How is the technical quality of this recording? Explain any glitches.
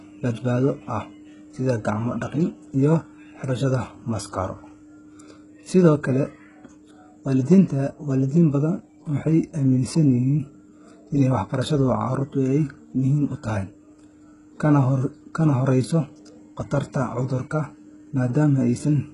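Technical quality is poor, with heavy coding damage running through the whole speech recording. The treble sounds synthetic: sibilants come out gritty and lisping, with a metallic sheen, and nothing is present above about 11.1 kHz. This is likely HE-AAC compression at a very low bitrate, around 12 kbps. Only the lower spectrum is properly coded, and the upper band is rebuilt by copying lower content upward under a coarse envelope, so the highs stay bright but no longer match the real harmonics.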